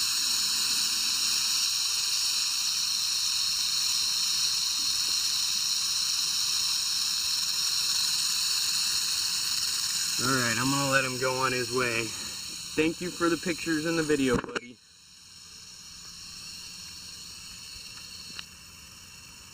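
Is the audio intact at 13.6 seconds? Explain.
No. At 13.6 seconds, as across the whole clip, one channel arrives a fraction of a millisecond behind the other, and summing the two to mono produces channel delay (comb filtering). Content shared by both channels cancels at evenly spaced frequencies, with the first notch near 700 Hz and further notches stacked above it. Those fixed gaps in the spectrum make the sound hollow and phasey.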